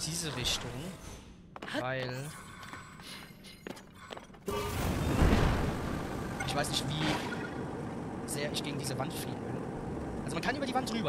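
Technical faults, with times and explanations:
3.23 s to 11.09 s, time-stretched section: from 3.23 s the pace abruptly jumps to about 1.64 times the earlier rate while pitch stays unchanged, giving a rushed texture. This is likely software compressing the audio's duration by discarding short segments to preserve pitch.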